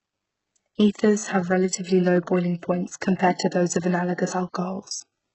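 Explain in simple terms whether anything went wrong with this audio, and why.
The recording was squeezed very hard to make the file tiny, most likely by HE-AAC compression. That method keeps only the lower part of the sound and fakes the upper part by copying lower pieces upward. Here the upper part is rebuilt rather than real, and the damage is heavy throughout the whole clip. The speech sounds oddly fizzy on top, with s sounds coming out gritty, metallic or lispy.

A second problem, pre-echo, comes from the same kind of compression, which works on short chunks of sound at a time. When a sudden sound lands late in a chunk, the noise meant to hide under that loud moment leaks into the quiet just before it. At 3.16 to 3.19 s, about 36 milliseconds just before "to those of the", a short hiss arrives early and the start of the sound is smeared and soft.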